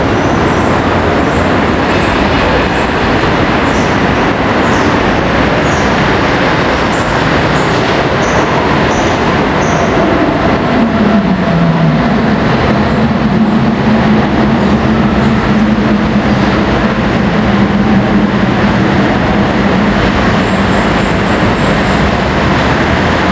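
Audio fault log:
Throughout: gain pumping. The gain swings by around 10 dB, leaving the audio squashed. The likely cause is gain set far too high, with a fast limiter clamping each peak.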